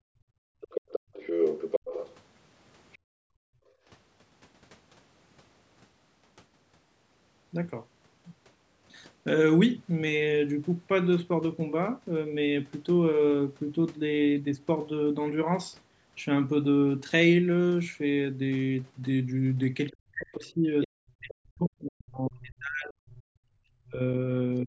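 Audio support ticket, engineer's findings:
Background gated by the echo canceller: room tone dips 0.0–1.13 s (about 0.7 s affected, down about 32 dB) and 2.98–3.25 s (about 38 dB). The canceller clamps the mic while the loudspeaker plays. Waveform shows a flat floor. Spectrogram shows blank noise bands.

Other side's voice leaking through: 0.61–2.15 s at about 5 dB below speech, 2.93–2.98 s faint at about 30 dB down, and 20.82–21.34 s at about 10 dB down. Likely residual loudspeaker echo the canceller failed to subtract. Spectrogram shows a second, overlapping harmonic stack.

Speech suppressed in double talk: 19.9–24.0 s, most of that span attenuated, deepest about 40 dB, plus a brief dip from 24.64 s to the end at about 25 dB. Likely the canceller ducking both sides during simultaneous talk. Waveform shows choppy envelope holes. Spectrogram shows harmonics fading out. Band tops out at 8 kHz, consistent with normal call mic processing.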